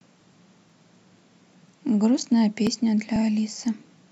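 Audio missing between chunks at 0.70, 1.68, 2.18, 2.67, 3.16 and 3.65 s: tiny skips about every half second, each a few milliseconds dropped, likely where chunked processing of the speech lost audio at each chunk change.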